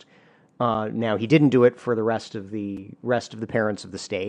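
A gap between stream segments occurs at 0.75 s and again at 2.77 s, about two seconds apart, matching the 2.0 s segment length. Each segment boundary leaves a hole of about 5 ms that the player fills with silence, producing a brief, hard-edged dropout in the speech without losing any audio.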